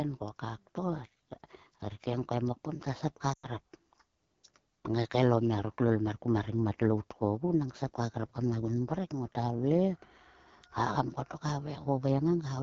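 The whole clip passes through the AMR wideband (HD Voice) codec at a low rate, which fits its 8.85 kbit/s mode. Speech is rebuilt from a pulse-driven vocal tract model with noise filling the top band, so the sound is plainly rough and raspy throughout.

From 3.34 to 3.47 s, lost AMR speech frames leave about 100 ms missing, which fits five dropped frames. The decoder repeats the last good settings at falling gain, so the sound drops to near silence within two frames, then returns briefly weak or rough.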